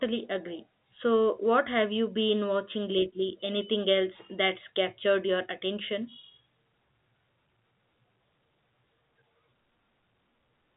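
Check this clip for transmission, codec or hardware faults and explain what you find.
No faults turn up in the speech, which carries the band-limited character of G.711 telephone coding with nothing above about 3.8 kHz, consistent with a 64 kbps A-law path, and with at most a faint trace of the codec's level-following quantisation noise.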